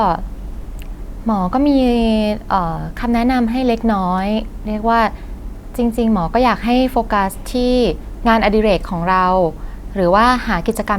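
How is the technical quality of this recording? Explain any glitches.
The technical quality of this recording is sound, with no glitches to explain.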